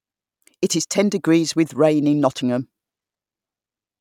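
No technical faults can be heard anywhere in the speech signal.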